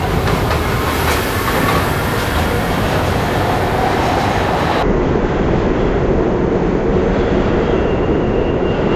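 From 0 to 4.83 s, the sounds play at double speed and an octave higher. This is a wrong sample rate, consistent with 16 kHz audio played at 32 kHz.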